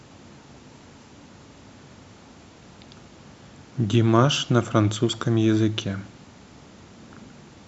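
From 0.16 s to 7.60 s, faint regular ticks run through the speech about every 0.15 s, around fifty. These are clock slip clicks. The likely cause is two unsynchronised clocks drifting roughly 150 ppm apart. Each tick fits one dropped or repeated sample.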